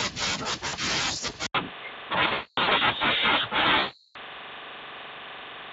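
At 0.67 to 0.75 s, VoIP packet loss concealed by the speech codec stretches the last sound into a brief buzzy smear. On a spectrogram, the formants freeze into flat horizontal bands while the waveform envelope shrinks, covering about 60 ms of missing audio.

From 1.47 s to the end, the input switched to a poorer device, likely a headset call profile. After a silence of about 80 ms, the sound turns boxy. The spectrogram goes blank above 3.8 kHz, the noise floor sits about 45 dB below the signal, and the level shifts by about 5 dB.

The same concealment returns twice. From 2.27 to 2.73 s, about 340 ms is lost in patches spread over 440 ms, with the longest gap at 240 ms. That stretch sounds like a fading hoarse drone. From 3.79 to 4.17 s, about 360 ms is concealed, and the spectrogram shows smeared, decaying bands. The Speex coding adds only a slight roughness.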